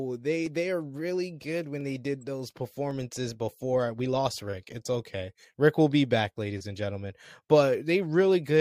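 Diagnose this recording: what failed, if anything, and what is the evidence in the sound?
Two sharp clicks in the speech, at 1.81 s, right after "they are really good", and at 2.91 s, just after "they did those". Each looks like dropped samples, with a fraction of a millisecond missing. The waveform jumps, most likely from a driver or buffer hiccup.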